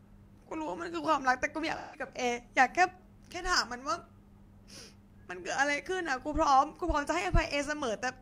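Speech with AAC frame loss with concealment: between 1.76 and 2.07 s the decoder lost a short run of frames, about four by the sound of it, and rebuilt the gap from the last good spectrum, leaving a brief smeared, noisy, phasey patch in place of clean speech.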